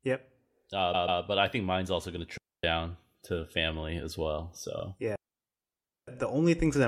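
Repeated frames at 0.93 to 1.21 s, just before "but I think mine's": a 139 ms block of the compressed stream plays twice more, giving a stutter and adding about 0.28 s.

Digital wireless dropout at 2.38 to 2.64 s, right after "mine's also going to": the receiver loses too much data and mutes, leaving a clean 0.26 s hole of near silence with no noise burst around it.

Repeated frames again at 4.79 s, just after "to family as well": a 46 ms block is replayed once, a brief stutter.

Digital wireless dropout at 5.16 to 6.08 s: a longer mute of 0.92 s, again a clean gap of near silence without noise at either edge.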